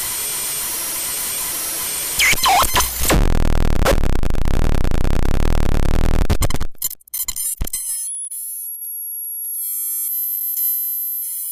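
Periodic USB or driver dropouts run from 1.06 to 11.45 s in this sound recording: something stalls the audio path every 0.1 s, blanking roughly a millisecond each time into regular ticks.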